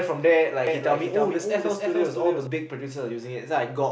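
A doubled audio track runs from 0.67 to 2.47 s: a dry copy trails roughly 300 ms behind, about 5 dB quieter, likely from a second, slower capture path.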